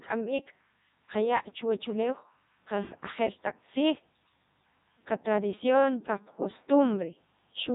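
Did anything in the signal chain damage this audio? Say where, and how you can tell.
Yes, the codec stage did it: this speech has gone through a Codec 2 vocoder, heavily, for the whole clip. It sounds robotic and buzzy because only pitch, voicing, energy and a spectral envelope survive at 3.2 kbit/s, and the decoder rebuilds the voice from sine waves, so the original waveform is gone.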